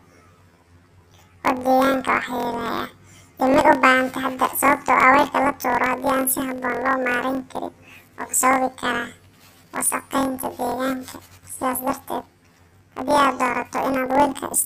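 Planar audio read as interleaved runs through the whole speech clip. Each block holds every left-channel sample followed by every right-channel sample, but the reader treats it as alternating left-right pairs. Each 23.22 ms block, which fits a 1024-sample buffer, therefore plays twice at double speed, first the left half and then the right, keeping the overall pace intact. The speech sounds an octave high, with a flutter repeating at 43.1 Hz.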